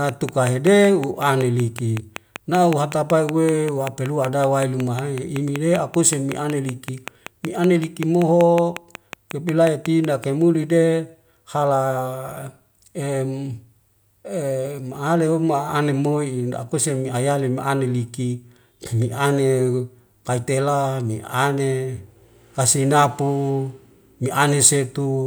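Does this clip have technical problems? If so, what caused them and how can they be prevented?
Yes: a regular train of clicks runs from 0.09 to 10.25 s, about 5.3 per second, loud and evenly paced unlike random crackle, likely from interference or a faltering interface. Keep cables and interfaces away from noisy equipment and secure.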